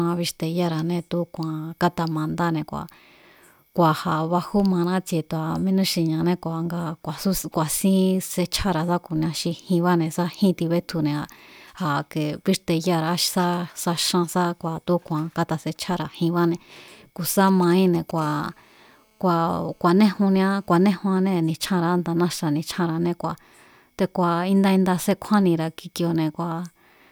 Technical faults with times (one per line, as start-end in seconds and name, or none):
17.48-18.20 GSM signalling bursts
18.21-20.89 GSM phone buzz